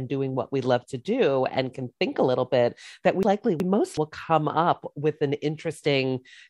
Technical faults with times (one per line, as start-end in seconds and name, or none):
3.23-3.97 frames out of order